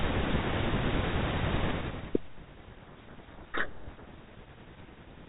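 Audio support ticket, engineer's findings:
Harsh, buzzing distortion buries the speech from 3.39 to 3.92 s, about half a second. Probable component: G.726 decoder. Codec payload misread. Code word bit order mismatched, so each difference value is decoded wrong and the adaptive prediction derails. Clears when packing agrees.

Link runs G.726 ADPCM at 32 kbit/s, consistent with a DECT handset. Band-limited below 4 kHz, light coding noise audible.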